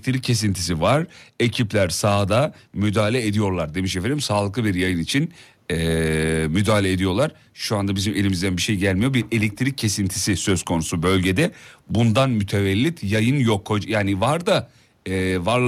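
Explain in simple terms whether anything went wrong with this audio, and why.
Nothing went wrong with this speech recording. A faint background noise from the room sits far beneath the speech, and that is simply the space where the microphone was, not a fault.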